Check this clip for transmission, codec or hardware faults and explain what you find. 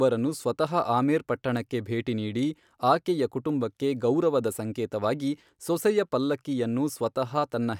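Nothing audible in the speech points to a transmission, codec or hardware fault, so there is nothing to report.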